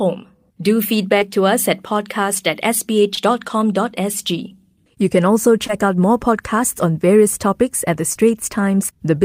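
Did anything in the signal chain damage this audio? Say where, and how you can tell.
Yes: short concealed packet loss on the network leg, at 1.19, 3.15, 5.67 and 8.13 s, just before "to us at podcast", after "us at podcast at", and between "can also" and "out more podcasts on". Each brief smear fits one lost 20 ms packet, which the decoder bridged by extending the preceding sound before blending back.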